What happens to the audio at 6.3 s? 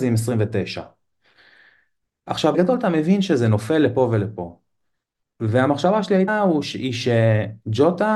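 At 6.27 s there's a quick glitch, so brief it's over almost before you register it. That's damaged data in a compressed stream: some bytes in the encoded speech came through wrong, so the decoder misread that bit of data and lost its footing in the stream. It then had to hunt for the next valid frame header to lock back on, and what it produced in the meantime is that short chirp, squawk, click or hole.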